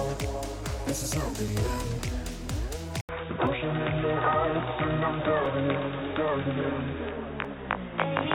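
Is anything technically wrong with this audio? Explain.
Yes, there are two faults.

At 1.48, 3.47, 5.46 and 7.45 s the audio skips briefly, about a hundredth of a second each time, about 2 s apart. This is likely audio missing between chunks: a piece is lost at each 2 s chunk boundary and the edges are spliced directly.

From 3.01 s to the end the sound turns dull and band-limited, with nothing above 3.8 kHz. An 80 ms silence marks the change, a faint new noise floor appears, and the level stays about the same. The likely cause is the input switched to a poorer device.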